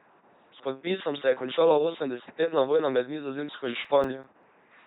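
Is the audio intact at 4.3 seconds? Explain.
No. At 4.3 seconds the audio falls inside a burst of CD scratch ticks running from 3.65 to 4.43 s. A scratch on the disc wipes out more data than error correction can rebuild, once per rotation, so the player patches or mutes the damaged samples. Here that yields five short ticks, the longest just a few milliseconds, spaced regularly across the span, of uneven strength.

Underneath, the entire speech clip runs through an LPC-10 vocoder, and its heavy damage fits a 2.4 kbit/s coder. The vocoder reduces speech to a small all-pole filter excited by either a pulse train or noise, deciding each instant as fully voiced or fully unvoiced. The result is a buzzing, robotic voice, with stray buzz or hiss wherever that voicing decision goes wrong, and no content above 3.8 kHz.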